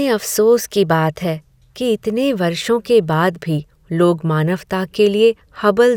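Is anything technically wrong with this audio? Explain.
No, nothing technically wrong turns up anywhere in this recording.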